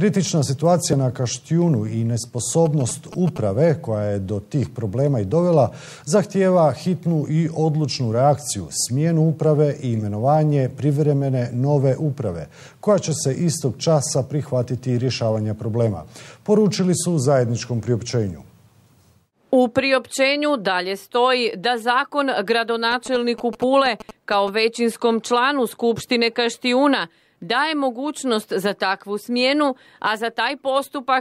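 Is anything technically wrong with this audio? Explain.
Yes. GSM signalling bursts appear from 2.66 to 3.38 s and from 22.91 to 24.49 s: a nearby 2G phone's short radio bursts get rectified by the audio circuitry, producing a galloping dit-dit-dit of short 217 Hz buzzes, roughly 15 dB below the sound.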